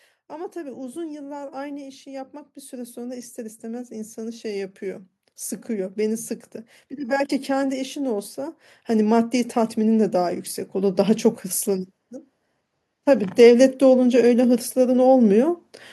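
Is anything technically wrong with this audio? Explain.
Yes. Automatic gain rising occurs three times in this speech: 0.29 to 6.3 s (about 11 dB), 6.89 to 11.95 s (about 9 dB), and 13.35 to 15.58 s (about 5 dB). Each time, the gain control judged the input too quiet and pushed level up slowly, so the voice and background noise swell together. A waveform shows the envelope widening steadily, and a spectrogram shows the noise floor brightening along with the speech.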